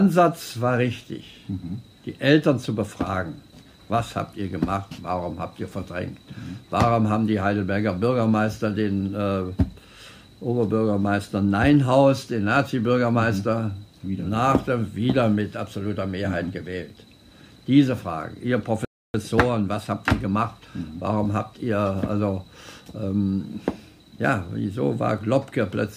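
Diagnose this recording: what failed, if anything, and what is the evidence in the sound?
A playback stall occurs at the playback stage. From 18.85 s to 19.14 s the sound stops mid-flow and the output goes silent for 293 ms before continuing. The likely cause is the player running out of data or its output thread being blocked.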